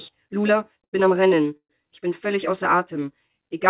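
A short stall from a late packet at 0.84 to 0.95 s stretches the current sound for about 86 ms with a faint buzz before playback resumes at the same point, so nothing is lost and the audio simply runs later. At 1.57 to 1.71 s a longer call audio freeze, likely a burst of delayed packets draining the jitter buffer, fills 128 ms with a buzz that fades into roughly 70 ms of silence. That decay to silence is what separates it from the brief stall. Both play over narrowband call audio with nothing above 4 kHz, which fits a G.711 mu-law link.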